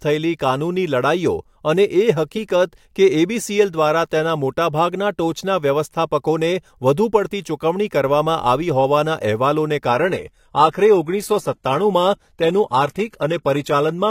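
At 9.88 s the adaptive stream abruptly drops to a lower bitrate with no gap. Thereafter treble is cut at 14.9 kHz and codec artefacts rise, fitting 20 kbit/s HE-AAC.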